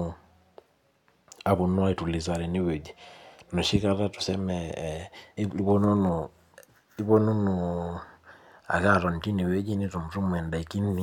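At 5.37 s, a brief blip breaks the speech. This is damaged data in a compressed stream. The decoder misread corrupted frames and lost sync momentarily.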